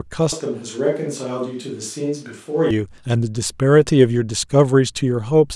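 Speech that from 0.32 to 2.71 s abruptly turns roomy and hollow, about 5 dB quieter, with thinner bass and room noise roughly 35 dB below the speech, likely a switch to a distant microphone. The waveform steps down; a spectrogram shows weaker lows and smeared reverberant tails.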